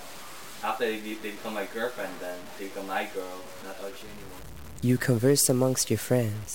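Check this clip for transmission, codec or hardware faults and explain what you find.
One fault runs through the whole clip: low bit depth without dither. The sound carries a grainy distortion that tracks its level, roughest in quiet passages, with error sitting around 20 dB below the signal. This is likely coarse rounding with no dither, fitting truncation to about 6 bits.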